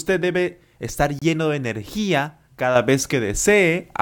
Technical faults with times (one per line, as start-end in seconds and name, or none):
1.19-1.22 Bluetooth stall
2.76-4.02 sudden gain jump